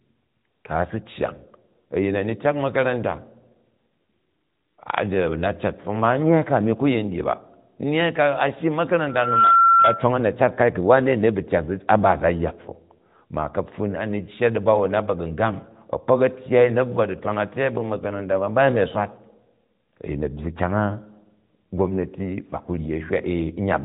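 At 9.08 s a microphone picks up its own loudspeaker and causes a loudspeaker feedback squeal: a 1.4 kHz tone swells within about a third of a second to roughly 10 dB above the speech, then stops at 10.12 s.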